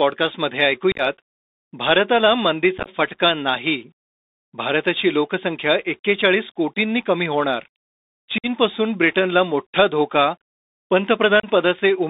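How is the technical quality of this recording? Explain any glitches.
The speech has been carried over a narrowband Bluetooth headset link and also has four short dropouts.

Bluetooth CVSD headset codec, throughout: the audio is confined to roughly 250 Hz to 3.7 kHz, fitting a 64 kbps CVSD link. Its one-bit, adaptive-step coding plainly audibly roughens the speech, with scratchy s sounds, slope-overload distortion on loud bright passages and a granular hiss underneath.

Unconcealed Bluetooth headset packet loss occurs at 0.92–1.01 s, 2.78–2.89 s, 8.38–8.46 s and 11.40–11.45 s. Packets of a few milliseconds were dropped and replaced by silence or an idle pattern, not concealed: about 56 ms, 60 ms, 56 ms and 34 ms missing, producing abrupt holes and a chopped, crackly texture.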